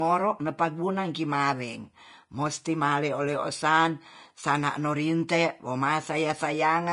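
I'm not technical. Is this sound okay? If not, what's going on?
No. The speech was likely squeezed by Vorbis compression throughout, which strips everything above about 10.6 kHz and turns fine detail into a hissy, grainy roughness.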